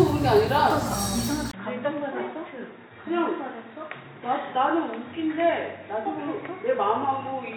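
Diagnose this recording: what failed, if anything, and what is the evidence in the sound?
At 1.51 s a 20 ms gap breaks the audio, and from there to the end it sounds duller and boxier. Nothing remains above 3.8 kHz, the level drops by about 5 dB, and a new, faint noise floor sits roughly 50 dB below the signal. The likely cause is an input switched to a poorer device at the driver stage, such as another microphone or a headset call profile, whose narrower band, lower gain and own self-noise replace the original capture path.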